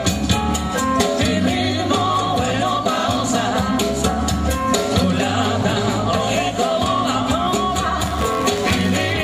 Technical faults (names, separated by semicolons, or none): buffer tearing